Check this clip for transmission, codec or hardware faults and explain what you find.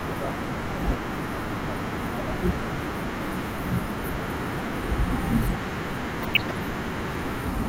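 One fault stands out in this speech clip. From 6.2 to 6.56 s there is DAB burbling. Weak reception let bit errors slip past error correction into the MP2 data. Corrupted samples put short blips of noise in single sub-bands, and corrupted scale factors make sub-bands jump in level. The result is noise blips and level jumps over the speech.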